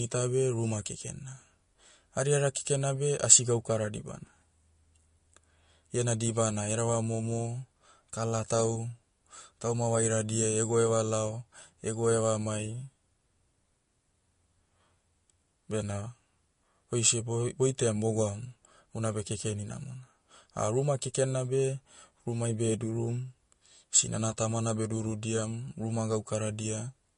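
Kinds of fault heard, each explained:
MP3 compression: throughout, the speech has a watery, swirling texture on s sounds, smeared attacks and nothing above 10.6 kHz, pointing to a likely MP3 encode near 40 kbps. A plain low-pass filter would cut the treble cleanly; here weak frequencies flicker frame to frame.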